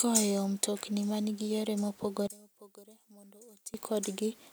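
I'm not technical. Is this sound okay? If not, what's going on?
No. Right after "mtokni ma nigi yore", from about 2.27 to 3.74 seconds, the speech suddenly drops to a faint trace, then returns. The likely cause is one channel inverted: one side of the stereo recording is flipped upside down, so when the two sides are mixed into a single speaker, the matching parts, including the centred voice, largely cancel each other out. Only the small differences between the two sides survive.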